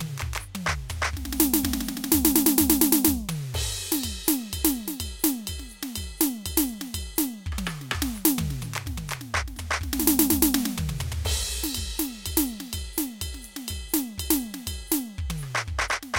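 Music, with no technical fault to flag anywhere in the clip.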